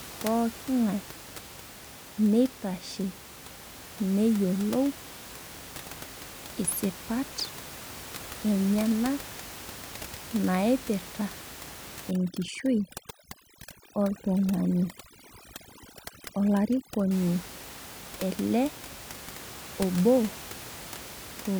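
From 12.11 s to 17.11 s the speech passes through overdone noise removal. A noise reducer set far too aggressively pulls individual frequency bands down or out whenever they sit close to its noise estimate, so the softer parts of the voice vanish along with the noise. The gaps drop and break up into twinkling specks. That sparkle marks it apart from plain low-pass dullness, and it contrasts with the steady room noise, about 16 dB under the speech, heard elsewhere.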